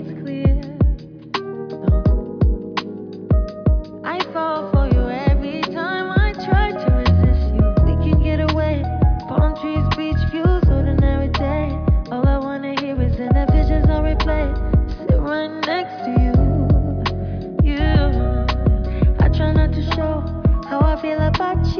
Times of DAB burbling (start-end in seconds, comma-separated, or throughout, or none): none